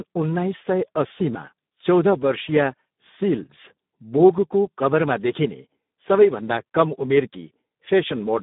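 From start to finish the speech sounds hoarse and grainy, and it is confined to a narrow telephone band of roughly 150 Hz to 3.7 kHz with nothing at all above 3.8 kHz. This is heavy Speex codec damage. The CELP coder has too few bits to model the excitation, which fits a low setting around 8 kbps, so the fine structure of the voice is replaced by coarse, noisy approximations.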